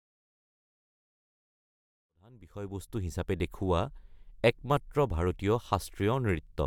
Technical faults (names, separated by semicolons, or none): none